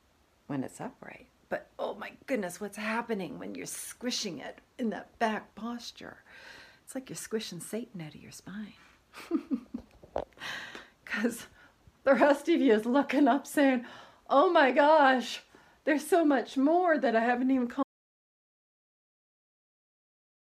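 At 17.83 s the audio drops out to silence and stays silent until the end, about 2.76 s of silence. The sound stops mid-flow with no room tone left, which points to a likely lost input while recording continued. On a waveform it is a flat line, and a spectrogram goes completely blank.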